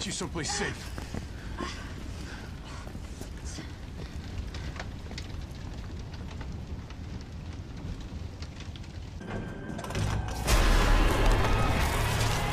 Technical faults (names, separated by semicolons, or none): loud pop